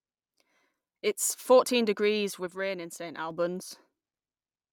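From 2.47 to 3.31 s the speech drops abruptly by about 6 dB, likely one channel dropping out before the mono sum, unlike a gradual fade or an arbitrary gain dip.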